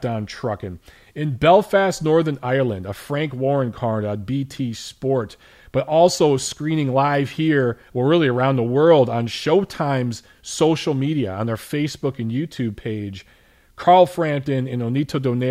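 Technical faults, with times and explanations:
Nothing in this speech recording stood out as a technical problem on listening.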